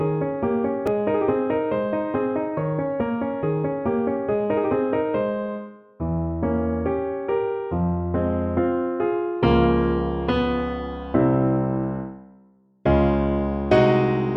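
At 0.87 s there is a repeated buffer. New audio arrived late, so the device played its last block twice more. That block lasts about 2.9 ms, which fits a 128-sample buffer. The triple repeat sounds like a brief click or buzz, and roughly 5 ms of audio is lost.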